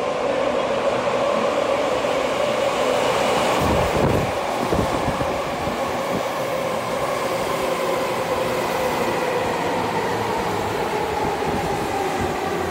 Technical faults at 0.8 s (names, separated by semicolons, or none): none